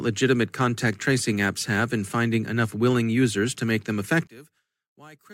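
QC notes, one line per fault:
4.27–5.33 s, one channel inverted: after "users to make them" the speech falls by about 26 dB to a faint residue until the end of the clip. The likely cause is one stereo channel flipped in polarity, so centred content common to both channels cancels on mono summing.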